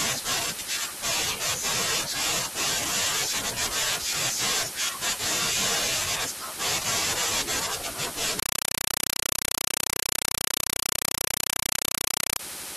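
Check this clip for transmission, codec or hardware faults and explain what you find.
One fault is present. From 8.39 to 12.39 s, very loud chattering static replaces the speech, pulsing 31.25 times a second. This is a compressed stream played as audio, which fits undecoded AC-3 data being taken as samples.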